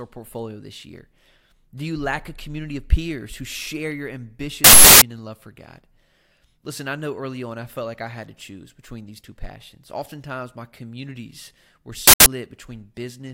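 A playback buffer was twice sent out before audio was written to it, so stale memory played as an uninitialised buffer: loud digital noise from 4.64 to 5.02 s after "peers who share your", fitting a 16384-sample block, and from 12.07 to 12.26 s after "my communities were".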